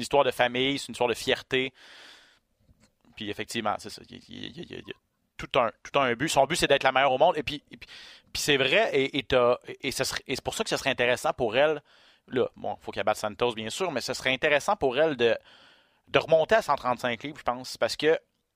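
No technical faults can be heard anywhere in the recording. There is nothing in the audio that needs a time marked or a closer look.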